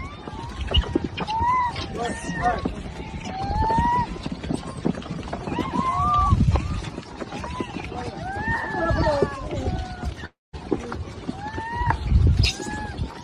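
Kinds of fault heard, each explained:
Long network dropout: at 10.25 s the sound stops arriving, and the receiver stretches the last moment into a fading buzz that gives way to near silence. Audio resumes at 10.55 s with about 280 ms missing, likely lost in transit.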